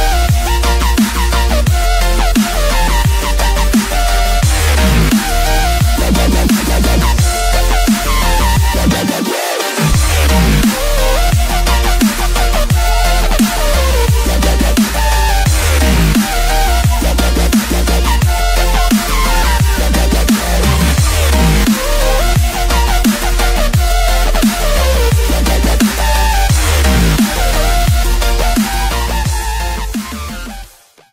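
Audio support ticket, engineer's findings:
No technical faults found on listening: the signal path behaves as expected, with nothing audible that needs attention.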